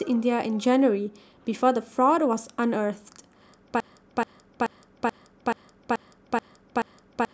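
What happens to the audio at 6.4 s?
At 6.4 s the speech is caught in a broken-record loop that began at 3.80 s and runs to the end of the clip. A 0.43 s fragment repeats exactly, back to back, eight times, and whatever should have followed is lost. The likely cause is a player or stream that stalled and kept resending its last buffered piece. Unlike an echo, nothing fades or overlaps. Each pass is an identical copy at a fixed period.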